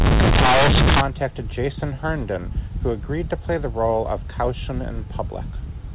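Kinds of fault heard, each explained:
Companded audio read as linear: from the start to about 1.01 s the speech becomes a very loud, harsh buzz, and heavy noise fills even the pauses. The bytes are mu-law coded but are played as plain linear 8-bit samples with no expansion. Each sign change therefore throws the output across roughly half its range, so quiet moments come out as loud as peaks and the waveform is badly bent.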